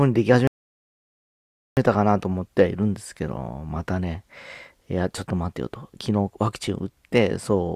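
At 0.47 s the speech drops to silence and stays silent until 1.77 s, a rebuffering stall. Playback exhausted its downloaded audio and paused for new data, then resumed exactly where it stopped. Nothing is skipped, but about 1.3 s of dead air is inserted.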